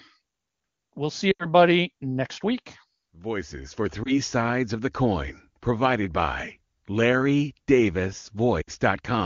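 Speech over an AMR wideband call, with lost AMR speech frames in three places. At 1.31 to 1.46 s, just before "next week", about 80 ms of speech drops out. At 4.03 to 4.18 s, before "sides of the coin", a 20 ms loss gives a brief dip. At 8.61 to 8.70 s, about 60 ms goes missing. Each loss is one or more corrupted frames that the decoder patched by repeating the last good sound with falling level. Around the gaps the wideband codec stays clear, which fits its top rate.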